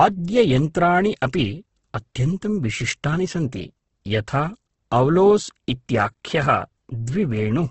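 From start to finish the speech carries heavy Opus compression damage. The audio stops sharply at about 8.2 kHz, a wideband limit that suggests a very low bitrate, around 12 kbps. The encoder keeps each band's overall energy but has too few bits for detail, so it fills bands with folded or noise-like content. Voiced sounds therefore come across grainy and rough rather than clean, which likely points to Opus running in its CELT mode.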